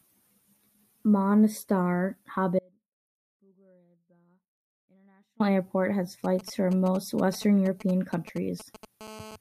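At 2.59 s the speech cuts out abruptly and stays gone until 5.40 s, a loss of about 2.8 s. This is an audio dropout to a faint residue. The gap is not silent: a faint leak of sound remains, roughly 35 dB below the normal level. That points to the wanted signal likely being interrupted while the path after the break stayed live. A natural pause or fade would taper, but this drops and returns with hard edges.

From 6.24 s to 8.85 s, GSM signalling bursts break through. They sound like a galloping dit-dit-dit of short buzzes, roughly 20 dB under the speech. A nearby 2G phone is sending brief groups of radio bursts, at a 217 Hz rate, as it does when signalling before a call or text. The audio circuit rectifies them into sound. What sets this apart from the later buzz is its intermittent, clustered rhythm rather than a continuous tone.

At 9.01 s the pattern turns into a steady GSM phone buzz that lasts to 9.36 s, about 18 dB below the signal. 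It is a hard, raspy 217 Hz buzz full of harmonics. The phone is now transmitting in regular bursts as in a call, so the rectified radio pulses form a nearly steady drone. The drone has no relation to the speech and lacks the stop-start gallop of the signalling bursts.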